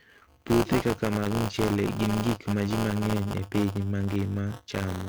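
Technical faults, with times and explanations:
throughout: buffer tearing, a 200 Hz robotic buzz as each 5 ms buffer splices in about a tenth of audio some 20 ms old, seen as regular waveform steps.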